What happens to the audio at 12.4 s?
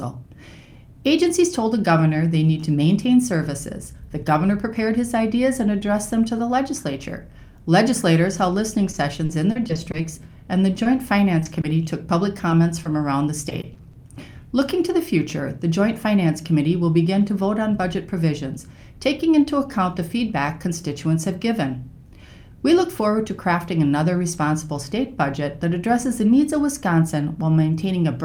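Two brief short concealed packet losses occur, at 12.37 to 12.41 s and 12.49 to 12.53 s. Each time, about 20 ms of audio arrived too late. The receiver extended the preceding sound to fill the gap, then blended back, leaving a quick smear or wobble.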